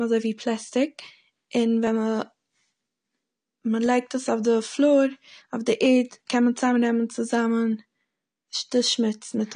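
Throughout the speech, the band above about 9.7 kHz is empty and the sound is dull and smeared, with a warbling, fizzy texture on sibilants. This is likely AAC compression at a low rate, which fits a bitrate around 32 kbps, lowering the cut-off and thinning the spectrum.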